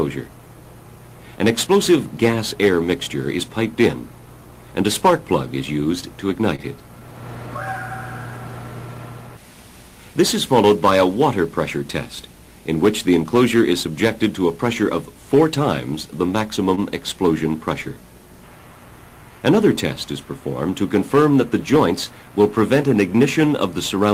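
At 6.55 to 6.61 s and again at 16.75 to 16.80 s there is a short stall from a late packet. Each time a packet arrived late, the jitter buffer emptied, and the receiver stretched the last sound, by 29 ms and then 22 ms, before resuming where it stopped. Nothing is lost, but the sound lags by that much more afterwards. On a spectrogram, each stretch appears as a brief, flat, repeated slice; the waveform shows a short looping pattern.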